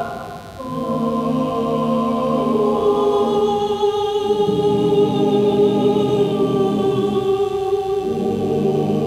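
A steady, raspy mains buzz runs under the audio from start to finish, roughly 30 dB below the signal. It is built on 50 Hz mains, with sharp spikes twice per cycle whose harmonics climb into the kilohertz range. A dimmer, rectifier or unshielded cable would let such spikes in.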